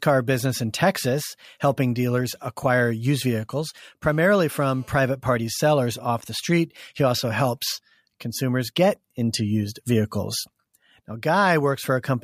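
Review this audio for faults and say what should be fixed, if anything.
A nearby 2G handset on a call was transmitting its bursts at about 217 Hz, and the recording chain rectified those radio pulses into the audio path. The result is GSM phone buzz from 4.04 s to 4.98 s, just after "dealers acquire used vehicles" and ending before "party sellers off the". It is a hard, raspy tone at 217 Hz with a dense stack of harmonics, about 32 dB below the speech, steady throughout and unrelated to it. To prevent this, keep mobile phones off or in flight mode and well away from microphones, cables and preamps while recording.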